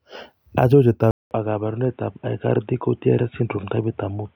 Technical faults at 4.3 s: input switched to a poorer device

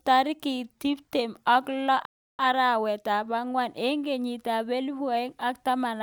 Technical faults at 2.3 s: playback stall

